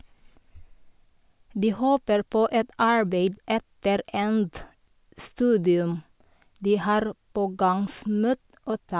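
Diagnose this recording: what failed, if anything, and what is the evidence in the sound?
No fault is audible.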